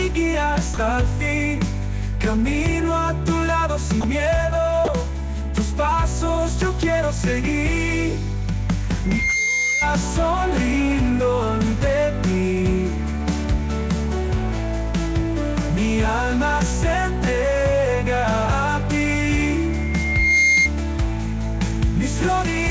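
At 0.74 to 0.77 s, 4.01 to 4.04 s and 4.85 to 4.88 s, the sound drops out for 30 ms each time. Each gap is filled with a brief patch of steady noise or near silence before the sound returns. This is likely sound dropped by the voice detector. The sender judged those moments to be background and stopped transmitting. The receiver played comfort noise until the detector triggered again.

A loudspeaker feedback squeal runs from 9.04 to 9.92 s. A single 2.1 kHz tone swells over roughly a third of a second until it is about as loud as the sound itself. The microphone is picking up the loudspeaker it feeds. At 2.1 kHz the loop gain exceeds one, so that tone keeps reinforcing itself. The same 2.1 kHz squeal returns from 19.71 to 20.70 s. This time it builds more slowly, over roughly 0.7 s, and ends up somewhat louder than the sound, around 5 dB above it. Throughout, the call path leaves nothing above 8 kHz, which fits G.722 at 64 kbps.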